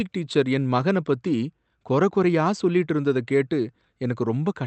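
No technical faults are audible.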